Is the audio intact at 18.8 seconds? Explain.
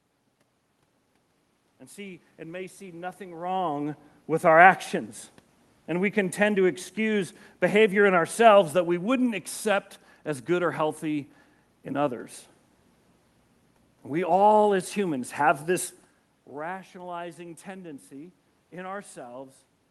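Yes, the speech at 18.8 seconds is intact, with no dropout, distortion or other system fault at that moment.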